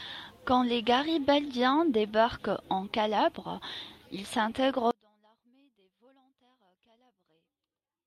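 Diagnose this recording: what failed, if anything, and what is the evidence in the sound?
From 4.91 s to the end, the speech falls by about 38 dB in mono, leaving only a faint residue. The likely cause is one channel inverted in the analogue wiring, so the identical centred speech cancels when both channels are summed.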